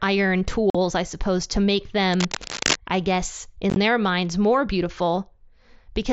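Speech heard over an mSBC Bluetooth headset link, with unconcealed Bluetooth headset packet loss at 0.70 s, just before "I suppose to make". A 45 ms stretch of audio simply drops out with abrupt edges. At 3.70–3.76 s, after "I guess" and before "their minds more", the losses are scattered over 60 ms with the longest gap 15 ms, giving a brief chopped roughness. Because nothing fills these holes, they stay empty rather than smeared. Between "I suppose to make" and "I guess", from 2.13 to 2.76 s, cable scratch noise lays dense, uneven rustling bursts over the speech at nearly the speech's own level, likely from a worn cable or connector being moved. Unlike the packet loss, it adds noise on top of the sound instead of cutting holes in it.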